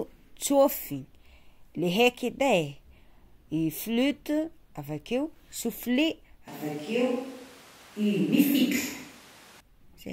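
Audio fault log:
6.48 to 9.60 s, switch to a distant microphone: the close microphone's feed likely dropped out here, leaving only a pickup much further from the talker until it returns at 9.60 s. Both changes are abrupt. For those three seconds the speech turns hollow and roomy, with thinner low end, because the far microphone hears more reflections than direct sound. Loudness stays about the same, while room noise rises to roughly 25 dB below the speech.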